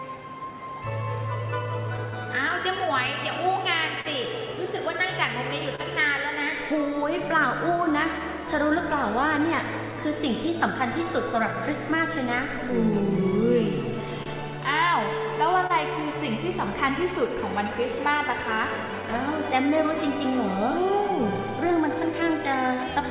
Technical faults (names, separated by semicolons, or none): clock drift between sender and receiver; repeated timing corrections; scattered short gaps; short stall from a late packet